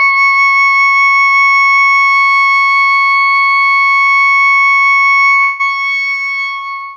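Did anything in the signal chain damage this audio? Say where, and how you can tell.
Yes, two kinds of damage, both from the network side of the chain, where the music was streamed as packets.

The first is short concealed packet loss, at 1.75 to 1.80 s and again at 4.06 to 4.09 s. Each time about 20 ms of audio didn't reach the decoder in time. It patched the gap by extending what it had just played, then crossfaded back into the real signal. You hear it as a quick smear or tiny wobble in the music rather than a clean click.

The second is longer, from 5.41 to 5.61 s. Roughly 0.2 s of the music is simply gone. Instead of dropping to silence, the sound just before the gap carries on as a sustained, fading continuation for the whole stretch. The music then resumes further along, with that slice missing. That's likely a long network dropout, a gap too big for concealment to cover convincingly, so the decoder's synthetic fill is exposed.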